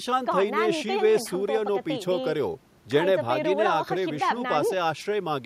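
Nothing stood out as a technical fault anywhere in the speech on listening.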